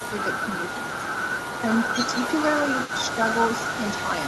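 From 0.00 to 0.12 s the speech sinks by about 10 dB, likely speech suppressed in double talk. Unlike a packet dropout, the level ducks rather than vanishing outright.

From 0.19 s to the end, an echo leak adds a copy of the speech 141 ms late, about 10 dB down, likely from a loudspeaker echo canceller letting residue through. It is a distinct delayed repeat rather than a smooth reverberant tail.

The same ducking returns at 0.58 to 0.99 s (about 10 dB), 1.61 to 1.68 s (about 10 dB) and 2.08 to 2.13 s (only about 5 dB).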